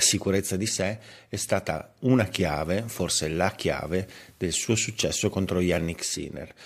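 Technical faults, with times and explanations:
2.12–6.30 s, digital radio blending to analogue: the receiver loses its digital stream and cross-fades over about 441 ms to the station's FM broadcast, then fades back near the end. During the FM stretch, a steady hiss sits roughly 35 dB below the speech, and the level shifts by about 2 dB, since the two paths are not matched in loudness.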